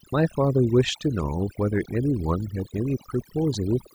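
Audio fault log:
Throughout: overdone noise removal. Noise reduction set too hard mutes bands near the noise floor, leaving a lowered background that breaks up into twinkling specks.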